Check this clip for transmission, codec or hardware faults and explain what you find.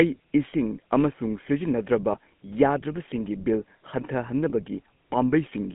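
Two problems turn up: the whole clip has been through a GSM full-rate codec, and there are two short dropouts where lost GSM frames were patched over.

The GSM full-rate codec colours the entire clip. It models the vocal tract and drives it with a coarse pulse train, throwing away much of the fine detail in the excitation, which fits the 13 kbps full-rate scheme. The line band runs from about 150 Hz to 3.4 kHz, so there's no low end and no air on top. The codec damage is plainly audible as a buzzy, gravelly roughness over the speech.

The lost GSM frames show up at 2.12 to 2.16 s and again at 4.5 to 4.66 s. The first gap is about 20 ms, which fits a single dropped frame. In each case the decoder filled in by repeating the last good frame's settings. What you hear is a brief rough, metallic ring where the speech should continue.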